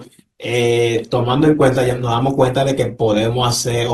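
From 0.95 s to the end, the speech suddenly shows rising codec artefacts, with no gap at the switch. This is an adaptive stream at a lower bitrate, a drop consistent with Opus going from about 64 to 16 kbit/s after the connection slowed.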